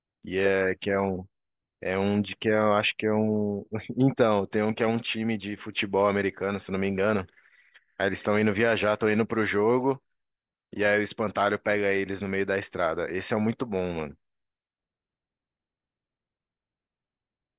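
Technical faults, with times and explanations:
Nothing technical goes wrong anywhere in this speech recording, so there's nothing to flag here.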